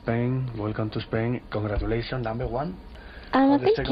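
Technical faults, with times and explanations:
Nothing here stands out as a technical problem; the audio just runs along without any glitches worth flagging.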